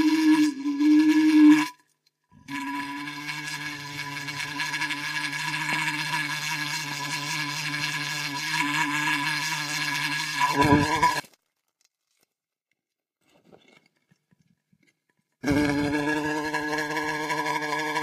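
From 11.20 to 13.21 s the sound drops by about 27 dB, likely from one channel inverted, so shared content cancels in the mono sum. Unlike a dropout or mute, a faint residual copy of the sound remains audible rather than true silence.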